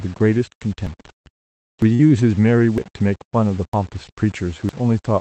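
From the first moment the speech carries a coarse, grainy distortion that shifts with the sound and turns quiet passages gritty, with error sitting about 30 dB below the signal. The likely cause is low bit depth without dither: rounding to roughly 6 bits leaves an error that tracks the signal instead of behaving like steady noise.

At 0.87, 1.82, 2.78, 3.73 and 4.69 s the sound skips forward abruptly, each time losing roughly 40 ms. The skips arrive at a steady rhythm of about one per second, and that spacing points to audio missing between chunks as the likely cause. The recording appears to be handled in one-second blocks, and a short slice is dropped at each handover. The two sides are then butted together with no gap.

From 1.95 to 2.01 s, just after the second skip, there is a brief smeared, wobbling stretch. This is short concealed packet loss. About 40 ms of audio never reached the decoder in time, and the receiver covered the hole with 43 ms of sound extrapolated from what came before before blending back into the real signal.

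Running through all of this, the call path's Opus coding limits the top end to 8 kHz.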